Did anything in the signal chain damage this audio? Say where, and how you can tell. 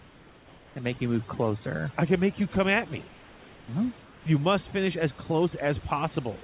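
Yes, there's overdone noise removal in the call processing, running the whole clip. Between phrases the room tone drops and breaks up into little twinkly specks. The suppressor is knocking out bands near its noise estimate, quiet speech detail included.

There's also comfort noise in place of the background, from 3.08 to 3.68 s just after "you come at me", and again from 4.02 to 4.26 s. The real room noise turns into flat, featureless hiss, about 3 dB and about 2 dB quieter. That's likely discontinuous transmission: the sender went quiet and the receiver filled the gap with synthetic noise. The audio also stops at 4 kHz, which fits a narrowband call codec.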